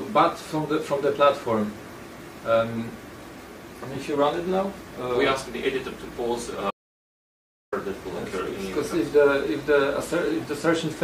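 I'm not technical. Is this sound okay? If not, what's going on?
No. Around 6.71 seconds the incoming signal was most likely lost for a moment, perhaps from a loose connection or an accidental mute, while the recording kept running and stored nothing but silence. That is an audio dropout to silence: the sound cuts off abruptly, leaving a dead gap with not even background hiss, then returns at 7.72 seconds. Roughly a second of the material is simply missing and can't be recovered.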